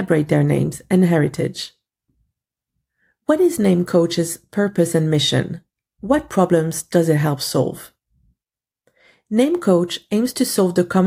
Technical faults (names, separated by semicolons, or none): none